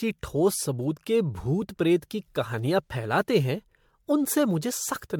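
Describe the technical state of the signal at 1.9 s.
At 1.9 s the speech carries generation loss, present across the whole clip rather than just this moment. The sound is swirly and hollow, with smeared consonant attacks, worse than a single MP3 pass at a rate near 106 kbit/s would give, while the band still reaches 19.9 kHz. That mismatch separates it from plain low-bitrate coding. The likely cause is about five successive re-encodes, each quantising on a shifted frame grid so noise and spectral holes pile up.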